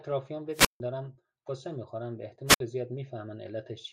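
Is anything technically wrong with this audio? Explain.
Yes. Two wireless microphone squelch dropouts occur, at 0.52–0.80 s and 2.47–2.60 s. The FM signal fades, hiss rises, and the receiver's squelch mutes the speech for 154 ms and then 61 ms.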